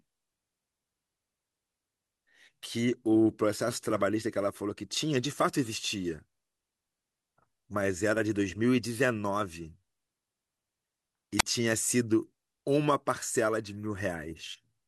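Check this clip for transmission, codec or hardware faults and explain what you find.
One fault: a wireless microphone squelch dropout in the speech from 11.38 to 11.43 s. The analogue FM link's radio signal fades, and as the receiver loses a usable carrier, hiss rises briefly before its squelch mutes the output to stop the noise reaching the line. Within that 55 ms window there is a hole of near silence lasting about 28 ms, after which the speech returns once the signal recovers and the squelch reopens.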